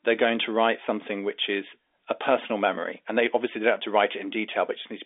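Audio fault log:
Nothing stood out on listening to this speech clip.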